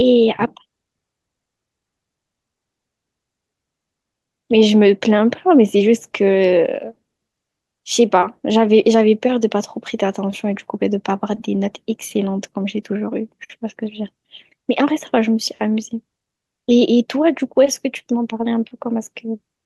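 No technical faults detected.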